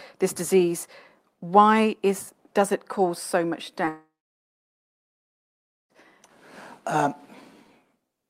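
A speech recording with two linked faults around its middle. At 3.85 to 3.89 s there is a short concealed packet loss: roughly 20 ms of audio failed to reach the decoder in time, and the receiver patched the gap by extending the preceding sound for about 12 ms before crossfading back. The result is a brief smear or wobble in the speech, and a short sound at that point may be lost. Immediately afterwards, from 3.89 to 5.92 s, the audio stops. A short concealment tail fades out, and about 1.8 s of near-silence follows before speech resumes, with roughly 2 s of content missing rather than delayed. This is likely a long network dropout, where no packets arrived for about two seconds and the receiver could only extend the last sound briefly before going quiet.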